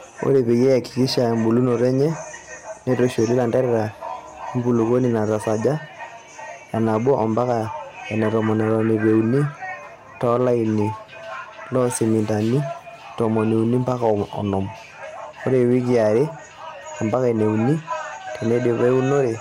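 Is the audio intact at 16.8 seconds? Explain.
No. Hard clipping runs through the whole clip, including 16.8 s: speech peaks overdriven by about 3 dB are cut flat, adding crackle on the loudest syllables.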